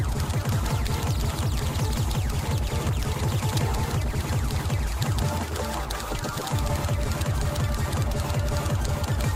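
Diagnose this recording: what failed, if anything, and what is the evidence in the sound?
Driver or buffer stage. A regular click recurs every 0.64 s from 0.20 s to 9.21 s, about fifteen times. These are clock drift buffer slips, likely from two clocks a few hundred parts per million apart. Each slip drops or repeats a handful of samples.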